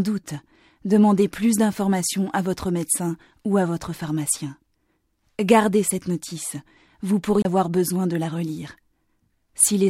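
There's one glitch here, a CD skip right near the end, from 7.42 to 7.45 s. You get a tick and a brief mute of roughly 30 ms, and then the sound comes back from a different spot rather than carrying on where it left off. That's the laser getting knocked or tripped by a flaw and landing on another turn of the disc's spiral, so the playback jumps.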